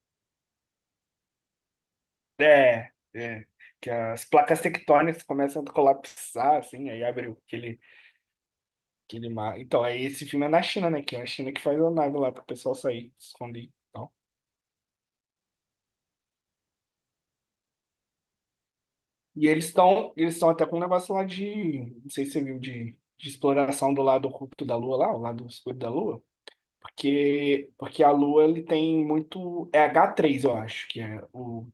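Nothing technical goes wrong anywhere in this speech recording, so there's no fault to point to.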